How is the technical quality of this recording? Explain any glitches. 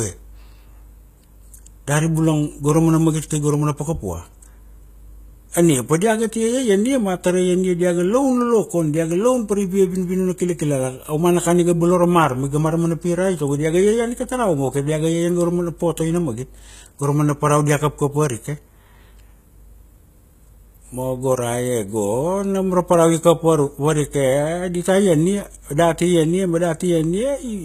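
The recording is clearly degraded by compression, audible from start to finish. The speech has the plainly audible damage of HE-AAC compression, likely at a low bitrate, which fits roughly 20 kbps. Nothing remains above 14.9 kHz. Only the lower spectrum is truly coded. The treble is rebuilt by copying lower bands upward under a coarse envelope. So the top still sounds bright but is synthetic. Its harmonics don't align with those below, and s sounds come out gritty and metallic.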